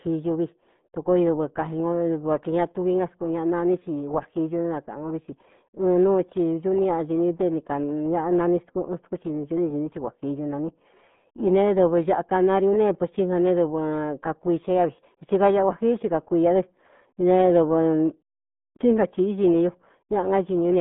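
Speech runs through the whole clip with the heavy damage of the RealAudio 14.4 codec. Nothing is left above about 3.8 kHz, and the usable band sits roughly between 150 Hz and 3.6 kHz, so consonants lose their edge and vowels turn muffled and gargly. What separates it from a plain telephone band-limit is that gurgling, smeared coding texture, which points to a very low bitrate of around 8 kbit/s.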